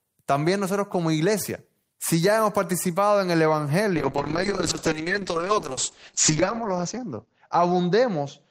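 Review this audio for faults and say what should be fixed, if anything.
A call bitrate drop begins at 3.97 s and lasts to the end of the clip. The call's bandwidth estimate fell, and the Opus encoder was pushed from 32 kbps down to 7 kbps, staying at that floor for 2.27 s. With so few bits, the speech is quantised coarsely and the coded band shrinks from 20 kHz to 8 kHz. The voice loses its top end and sounds muffled, rough and watery. Smoothing the bandwidth estimator and enforcing a higher minimum bitrate would stop a fall in the bandwidth estimate from starving the encoder this far.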